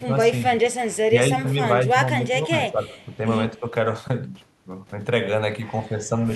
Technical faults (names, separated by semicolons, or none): speech suppressed in double talk; echo leak